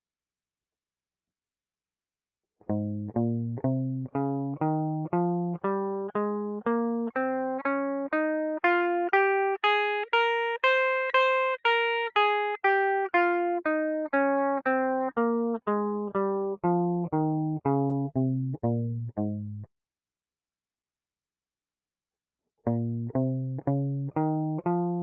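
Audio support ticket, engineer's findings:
Music; no faults found, call path working as expected.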